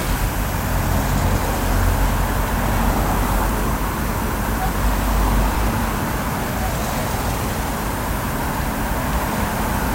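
Dropped buffers, likely from overruns, at 2.69, 5.55 and 6.92 s: each time a few milliseconds of audio vanish and the sound jumps ahead.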